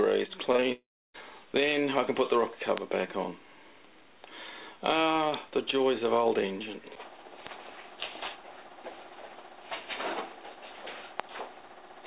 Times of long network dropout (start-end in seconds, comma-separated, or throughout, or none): 0.72-1.16